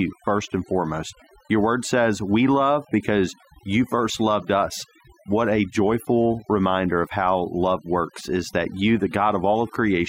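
From start to finish the speech carries overdone noise removal: a noise reducer set too aggressively gates individual frequency bands whenever they approach its noise estimate, stripping quiet vocal detail. Pauses fall to near silence with twinkling specks, and a spectrogram shows a blank floor scattered with isolated bright dots.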